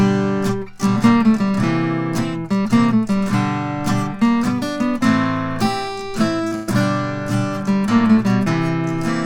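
At 6.47 s there is a short concealed packet loss. About 40 ms of audio did not reach the decoder in time. The receiver filled the gap by carrying the preceding sound forward, then blended back into the real signal at 6.54 s. The repair is brief. It comes across as a smear or wobble rather than a clean dropout.

Right after it, from 6.55 s to 6.70 s, comes a burst of packet loss. About 120 ms of audio went missing in a run. The receiver again extended the last sound it had, letting it fade as the gap went on. A pitched sound turns into a held buzz here. An unpitched one becomes a dwindling hiss. There is no silence in the gap. The audio then picks up further along, with that stretch gone.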